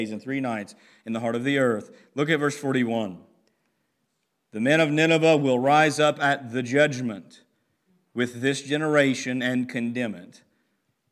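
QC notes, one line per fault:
No faults heard anywhere in the speech.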